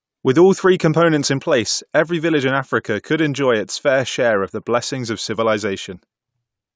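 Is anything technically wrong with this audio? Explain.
No, nothing is technically wrong with this audio.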